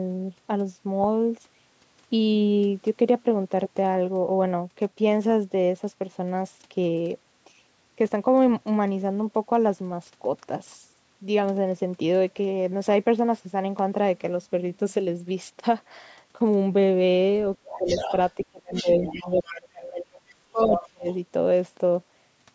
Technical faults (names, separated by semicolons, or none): other side's voice leaking through; speech suppressed in double talk